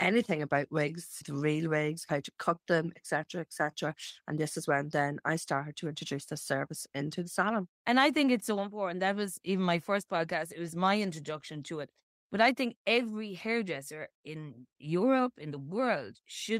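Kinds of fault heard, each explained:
Nothing stood out on listening to this speech recording.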